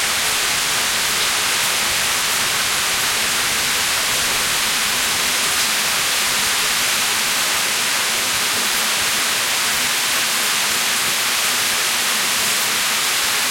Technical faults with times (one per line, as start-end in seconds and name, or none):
none